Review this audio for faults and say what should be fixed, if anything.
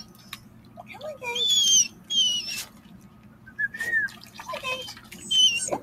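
A noise suppressor built for speech was left running on material that isn't speech, so it treats steady tones, ambience and reverb tails as noise to be removed. Its gain rides up and down by something like 15 dB across the clip. Attacks pass while sustained parts are pulled down, so the sound pumps and thins, and decays are audibly clipped rather than fading naturally.

The sound cut by the noise suppressor appears in specific stretches where the processor judged the sound to be noise and attenuated it more heavily. These stretches are 0.0 to 0.9 s (about 9 dB down), 1.89 to 2.1 s (about 9 dB), 2.66 to 3.58 s (about 10 dB), 4.13 to 4.37 s (about 8 dB) and 4.96 to 5.16 s (about 7 dB). In each, held or fading sound sinks, leaving dips and truncated tails.

To prevent this, disable or bypass speech-oriented noise suppression whenever the input is music or general sound, or switch to a mode designed for non-speech content.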